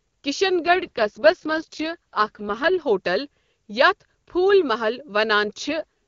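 From 0.65 to 2.82 s and again from 5.67 to 5.84 s, an AMR rate drop, consistent with 23.85 falling to 6.6 kbit/s, turns the speech rough and synthetic. It differs from packet loss or band narrowing because there is no gap and the same bandwidth is kept.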